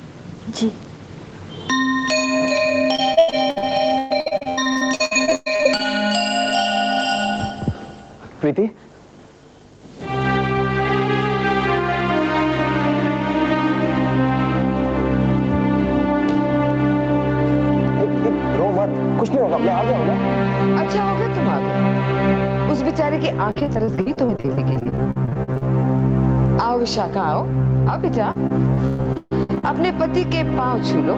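Gain pumping runs through the whole clip. The gain ducks under each loud sound by about 15 dB. That is likely a fast limiter riding an input gain set far too high. On the waveform, quiet stretches bulge upward and loud passages look flattened. A spectrogram shows the noise floor brightening and darkening in step with the sound.

From 2.95 to 5.81 s, repeated packet loss gives a choppy, robotic texture. Missing chunks are patched by stretching the last sound, and the gaps follow closely, with the longest around 120 ms. The spectrogram shows smeared, repeated frames and abrupt breaks in a top that already stops at 8 kHz.

The same repeated packet loss returns from 23.51 to 25.63 s as a denser stutter of short gaps, none longer than about 48 ms. It returns again from 28.31 to 29.65 s with fewer, longer holes of up to about 137 ms.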